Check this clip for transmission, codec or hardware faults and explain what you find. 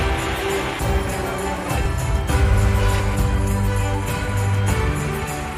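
Two brief faults show up, at 1.86 s and 3.00 s. Both are most likely dropped buffers (overrun): the software fell behind and the hardware overwrote a block of around 10 ms, so the surviving audio on either side was spliced together. Each is heard as the sound jumping abruptly forward, with no gap of silence.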